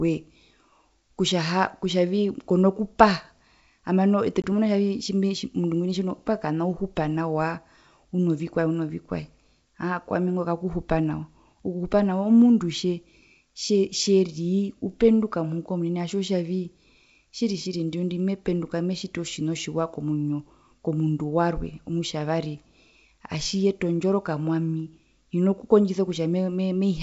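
At 4.42 to 4.45 s, just after "hambano ete", packet loss on an ADPCM call drops about one 20 ms packet. Silence fills the gap, then the decoder's predictor and step size mismatch the sender's. The waveform shows a flat, hard-edged hole and the spectrogram a blank vertical stripe, followed by a briefly distorted resumption.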